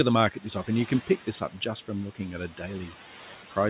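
Throughout the clip a noise suppressor is working frame by frame, cutting the bands it judges to be steady background by about 8 dB. The room noise, roughly 15 dB below the speech, dips in the gaps and swells back up beneath each phrase, so the floor seems to breathe.

Between 1.25 and 1.6 s, speech is cut by the noise suppressor. Its estimate of the noise briefly overlaps with quieter parts of the speech, so it turns those down along with the background, by up to about 12 dB at the deepest point. Only about a tenth of a second within that span is affected, and those soft portions sound swallowed and faint. The band limit at 4 kHz, which fits a narrowband call codec such as G.711, runs through the whole clip.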